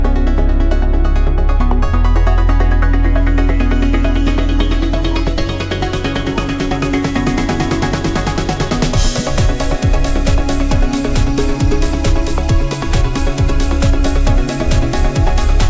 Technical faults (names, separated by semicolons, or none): none